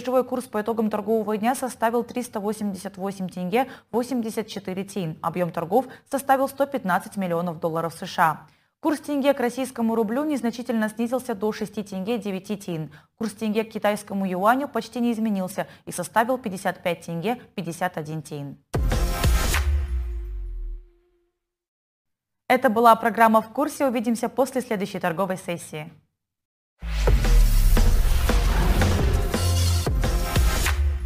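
From start to finish the audio carries crude rate conversion: the signal was resampled without a proper filter, by repeating the nearest sample, in a way that fits a step from 32 kHz up to 44.1 kHz. The irregular repeats follow a fixed pattern set by that ratio and leave an error roughly 25 dB below the signal, heard as a gritty, inharmonic fizz that rides on loud passages and high-frequency content.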